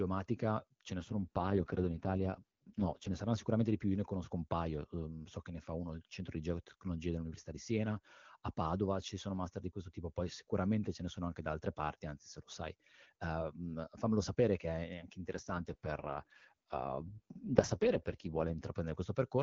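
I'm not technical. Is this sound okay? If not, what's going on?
No. Twice the speech turns rough, buzzy and somewhat robotic: from 0.98 to 3.14 s, clearing just before "saranno sicuramente di più", and from 15.34 to 18.64 s, starting right after "sapere che è anche". This is an AMR rate drop. The phone network switched the HD Voice codec to a much lower quality setting to protect the call on a weak connection. The sound doesn't cut out or get muffled; it just coarsens until the full setting returns.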